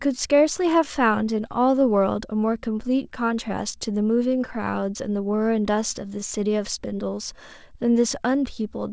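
From 0.14 s to 8.89 s, repeated timing corrections recur at uneven intervals. The receiver keeps repeating short pieces, adding nearly half a second. The tempo sounds slightly unsteady, with faint hiccups.

The cause is clock drift between sender and receiver. The sender's clock runs about five percent slow, so the jitter buffer keeps draining and needs padding. The sound stays band-limited below 8 kHz, consistent with a G.722 call path.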